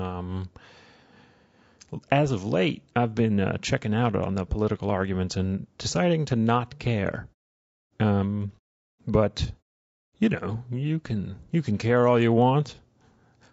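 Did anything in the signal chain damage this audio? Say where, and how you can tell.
Yes, at the codec stage: the speech sounds rough and grainy for the whole clip, with noise filling the gaps between pitch harmonics and a thin, synthetic top band, which points to low-delay AAC compression, likely AAC-ELD at around 32 kbps. Its short frames resolve harmonics poorly and starve the bit budget. The muted pauses drop cleanly to silence.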